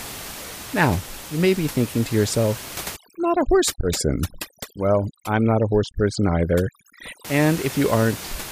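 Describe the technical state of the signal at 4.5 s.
At 4.5 s the signal is in a stretch of overdone noise removal running from about 2.96 to 7.25 s. Bands near the room noise, which sits about 14 dB below the speech, are pushed almost to nothing, leaving the voice over twinkling silence. A spectrogram shows a blotchy, speckled background with ragged gaps.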